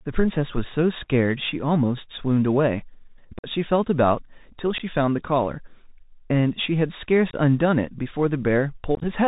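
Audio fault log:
throughout, Bluetooth CVSD headset codec. The speech is held below 4 kHz. Each sample is a single up or down bit at 64 kHz, and loud high sounds outrun the step size and distort. S sounds are scratchy. A granular hiss lies under the speech.
3.39–3.47 s, 4.78–4.82 s, 7.30–7.34 s and 8.95–9.05 s, unconcealed Bluetooth headset packet loss. The speech drops out for about 49, 15, 30 and 53 ms. The last two are broken into several short gaps. Nothing fills the missing packets, so the edges are abrupt. The speech comes back quieter for a moment.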